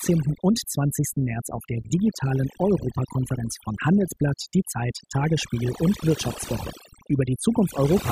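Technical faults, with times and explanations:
Throughout, overdone noise removal: the noise reduction was pushed well past a sensible setting on a noisy speech recording, so any frequency band sitting close to the estimated noise floor is pulled far down or switched off entirely. That strips the low-level parts of the voice along with the noise, leaving the background lowered and broken up into twinkling, isolated specks of tone.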